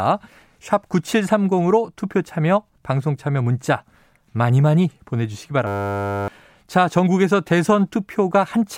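A speech recording with a system hang loop from 5.67 to 6.28 s: the playback stalled while the hardware kept replaying a single 10 ms slice, giving a steady 100 Hz buzz in place of the speech, with around 0.7 s of audio never heard. On a waveform the stretch is one identical 10 ms cycle repeated about sixty times; a spectrogram shows flat horizontal lines at 100 Hz and its multiples, starting and stopping abruptly.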